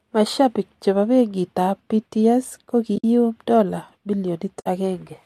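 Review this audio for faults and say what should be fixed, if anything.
AAC frame loss with muting leaves two soft-edged holes in the speech, at 2.96 to 3.04 s and 4.60 to 4.66 s. The lost frames are zeroed, so the sound fades out and back in. The gaps fit runs of 10 ms frames, likely from low-delay AAC. Prevent it with packet loss concealment or forward error correction on the link.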